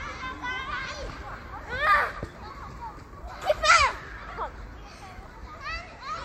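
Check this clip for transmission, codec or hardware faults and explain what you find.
No faults turned up when I checked this clip.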